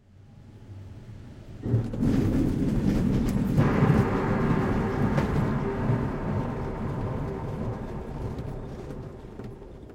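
No technical faults can be heard in this recording of sounds. There is nothing in it to mark at any point in time.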